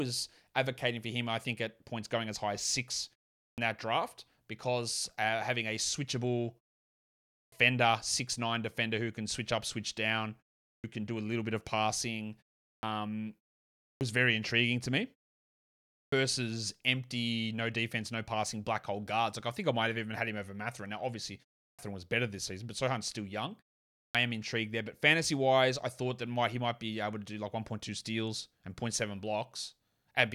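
Clipped start after a pause occurs at 3.47, 7.41, 10.73, 12.70, 13.89, 16.01, 21.66 and 24.03 s. Each time, the output device wakes late after silence, swallowing 110 to 130 ms, so speech such as "six nine defender who" starts abruptly.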